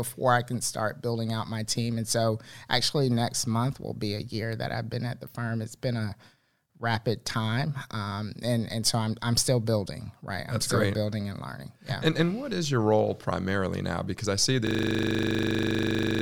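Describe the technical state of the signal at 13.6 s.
At 13.6 s the signal is intact, with no dropout, distortion, or other fault audible at that moment.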